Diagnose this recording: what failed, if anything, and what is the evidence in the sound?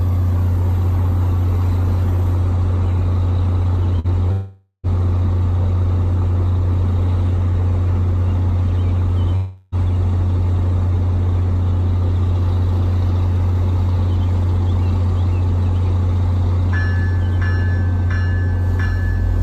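The network stage failed briefly: a short run of packets went missing, a burst of packet loss at 3.99 to 4.07 s. The receiver's concealment covered the hole by extending the last sound for about 46 ms while fading it, which is heard as a brief held buzz or hiss. The audio then picks up again with roughly 40 ms of material skipped, so the sound jumps forward slightly instead of continuing where it stopped.

Two longer gaps, at 4.32 to 4.86 s and 9.35 to 9.75 s, point to a likely long network dropout, where nothing arrived for several hundred milliseconds. In the first, the concealment stretches the last sound into a fading buzz or hiss over about 515 ms, ending in about 80 ms of silence before audio returns, with roughly 520 ms lost. The second fills about 365 ms with no silent stretch and skips about 360 ms.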